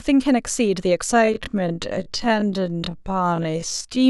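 Time-stretched section, 1.1 s to the end: speech abruptly drops to half pace at unchanged pitch, likely from software repeating short pieces.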